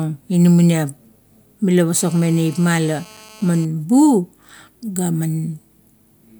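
From 1.96 s to 3.65 s the speech carries GSM phone buzz: a nearby 2G handset on a call pulses its transmitter about 217 times a second, and the audio circuitry rectifies those bursts. The result is a steady, harsh, harmonic-rich rasp, about 26 dB below the signal.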